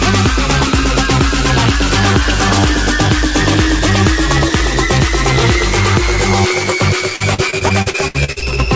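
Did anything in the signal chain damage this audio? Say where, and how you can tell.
Yes: repeated packet loss (robotic sound) on the network, 7.16 to 8.74 s. Twelve holes, up to 65 ms each, are filled by repeating preceding sound, so it turns choppy, with pieces missing.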